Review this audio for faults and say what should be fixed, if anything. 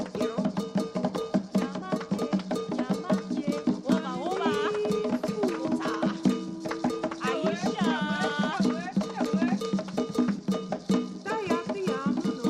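No faults found, so nothing needs fixing.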